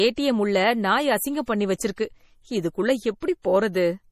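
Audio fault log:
Throughout: MP3 compression, likely. Nothing is present above 15.3 kHz, and the speech has a plainly audible watery, swirling texture. Sibilants turn metallic and chirpy, and consonant attacks smear. An encoder short of bits drops weak frequency lines, which then flicker on and off from frame to frame, and this fits a low rate around 40 kbps. A plain low-pass filter would remove the treble cleanly, without this shifting, bubbling character.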